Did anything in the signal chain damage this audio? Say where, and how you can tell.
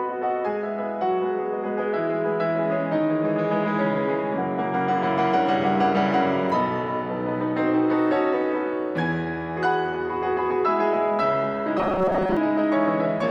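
Yes: from 11.78 to 12.37 s the sound turns into a rigid 188 Hz buzz, robotic sound likely from a starved buffer repeating short chunks of about 5.3 ms.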